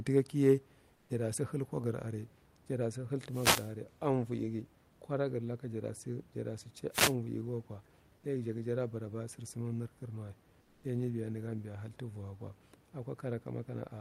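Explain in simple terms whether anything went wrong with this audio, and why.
Two different problems show up in this speech recording.

Between 0.95 and 1.09 s, and again between 10.61 and 10.83 s, the natural room hiss in the pauses is briefly replaced by a flat, featureless, slightly quieter noise. This is comfort noise in place of the background. The likely cause is that the sending side stopped transmitting during silence, and the receiving side filled the gap with made-up noise. Unlike a dropout, the sound never goes fully silent.

From 3.28 to 3.74 s and from 6.91 to 7.15 s, a short swish of static sweeps across the audio. These are wireless microphone noise hits: the radio signal from the microphone faded for a moment, and the receiver's own hiss rose up over the sound. The room's steady background noise stays constant, but these hits come and go in quick bursts.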